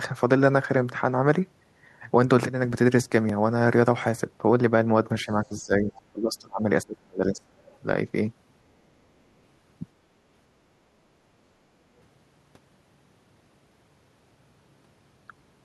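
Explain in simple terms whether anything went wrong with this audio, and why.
Several things went wrong, all in the first half of the clip.

At 3.29 s there is a repeated buffer. The next chunk of audio arrived late, so the playback device played the previous chunk a second time. That chunk is tiny, which fits a 64-sample buffer of about 1.45 ms. A repeat that short isn't heard as a stutter. It comes across as a brief click or buzz.

Between about 5.2 and 7.8 s the talker's voice keeps losing strength. This is speech suppressed in double talk, in three stretches: 5.25 to 5.89 s, 6.12 to 6.65 s, and 6.84 to 7.58 s. The first dip is fairly mild. In the second and third the voice nearly disappears. This likely happened because both sides spoke at once. The echo canceller couldn't tell the talker's voice from the loudspeaker's echo, so it turned everything down.

In the same stretch there is the other side's voice leaking through: faint scraps of a second voice at 5.19 to 5.24 s, 5.94 to 6.01 s, and 7.68 to 7.78 s. 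They are very quiet compared with the main talker, and each lasts a tenth of a second or less. The likely cause is that the talker's loudspeaker sound reached the microphone and the echo canceller didn't fully remove it.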